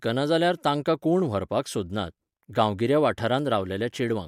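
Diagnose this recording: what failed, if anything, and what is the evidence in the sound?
Nothing failed: the sound of this speech recording gives no evidence of a fault at any stage.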